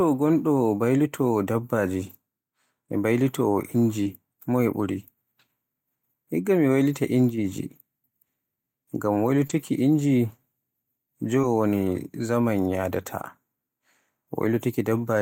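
Brief smears at 4.03, 9.47 and 11.41 s are short concealed packet loss. About 20 ms of audio never arrived, and the receiver extrapolated the preceding sound before blending back. Each of these is followed at 4.05, 9.49 and 11.43 s, and also occurs alone at 6.93 and 12.89 s, by a 20 ms patch of rougher, noisier sound. Each is a lost packet rebuilt from error correction, with the decoder playing the low-bitrate copy carried in the next packet.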